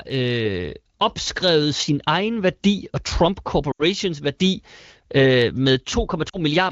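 Speech coded with AMR wideband shows lost AMR speech frames at 3.71 to 3.83 s, just before "værdi øh", and at 6.29 to 6.37 s. The decoder conceals the gaps by stretching and fading the last good frame.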